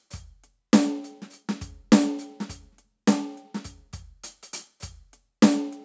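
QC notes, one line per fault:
Nothing stood out on listening to this music, which has passed through call microphone processing that leaves nothing above 8 kHz.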